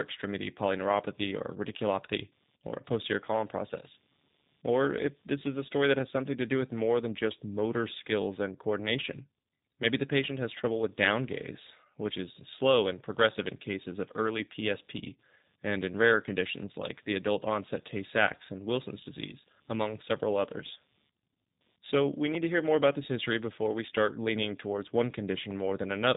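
Throughout the recording, a faint buzzing chirp pulses at around 150 times a second, well below the speech. It is computer activity noise: processor or peripheral load shifting the audio circuit's shared ground.

Also from start to finish, the speech sounds clearly rough, slightly synthetic and band-limited, with nothing above 3.8 kHz. That points to G.729 codec compression at 8 kbit/s, which rebuilds speech from a simplified vocal tract model and sparse pulses.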